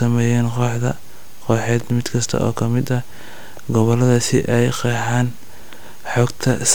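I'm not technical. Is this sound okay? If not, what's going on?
Yes, this one's fine: nothing in it stands out as a problem, so you can relax about it.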